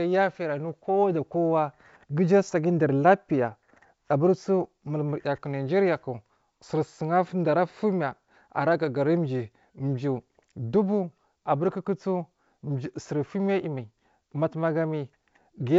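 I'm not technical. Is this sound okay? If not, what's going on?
Yes, no faults: it's ordinary wideband telephone audio using G.722 coding, with sound reaching up to about 7.7 kHz as expected for that kind of call.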